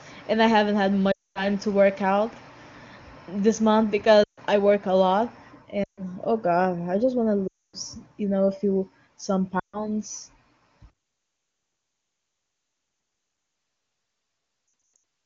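Short stretches of the speech sink quickly toward silence at 1.11–1.46 s, 4.23–4.39 s, 5.84–6.02 s, 7.48–7.76 s and 9.59–9.88 s. After each one the voice returns thin and rough for a moment. Near 14.96 s a scattered cluster of dropouts flickers over roughly 0.4 s. These are lost AMR speech frames: corrupted frames failed their checks, so the wideband decoder repeated the last good pitch and vocal-tract settings with falling gain. That fades quickly at HD Voice bandwidth, around a clear-sounding high-rate AMR-WB stream.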